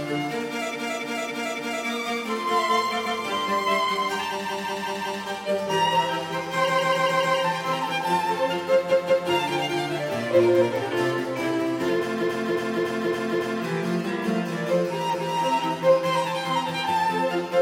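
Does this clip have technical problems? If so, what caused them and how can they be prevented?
Yes. Repeated frames cause stutters at 0.7, 3.02, 4.42, 6.64, 8.87, 12.17 and 15.1 s. A block of 0.14 to 0.28 s of sound replays one to five extra times. This adds about 4.7 s in total. Prevent it by deduplicating frames before writing or sending.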